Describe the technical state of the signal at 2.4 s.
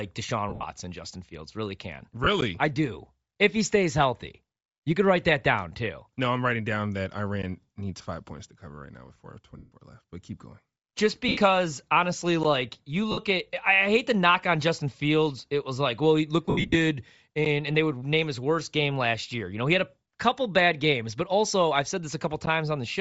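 At 2.41 s there is a gap between chunks: a hole of about 12 ms. The audio appears to have been delivered in blocks of about 5 s, and silence was left at the join, so nothing is lost, but the sound cuts out abruptly and resumes. It is heard as a brief hole in the sound.

Underneath that, and present across the whole clip, the speech carries plainly audible damage of the kind produced by low-bitrate transform coding, likely Bluetooth LC3 compression. The upper spectrum sounds thinned and partly replaced by noise, giving the voice a breathy, grainy edge. The character fits a 7.5 ms frame setting running at around 32 kbps, where the encoder discards much of the high band and fills it with noise.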